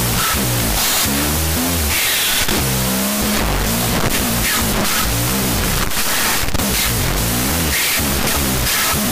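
Throughout, 16-bit samples are read as unsigned 8-bit, a wrong sample width that splits each into two values. The speech plays at half speed, an octave low, buried in loud noise.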